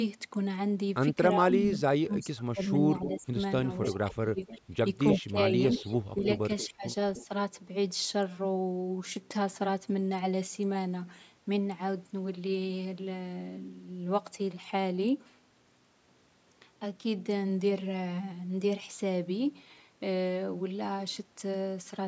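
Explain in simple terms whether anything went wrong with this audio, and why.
From 1.32 to 3.37 s and again from 3.92 to 7.3 s, the voice sinks, goes dull or breaks into pieces. This is speech suppressed in double talk, likely because the call's echo canceller turned everything down while both sides spoke at once. Unlike an echo, nothing extra is added; the real voice itself gets weaker.

Delayed repeats of the voice arrive about 0.3 seconds late at 3.02, 3.83, 4.48 and 5.12 s, then more steadily from 5.73 to 7.25 s. This is echo leak, likely from sound escaping a loudspeaker and being sent back. You hear an added second copy, not a missing voice.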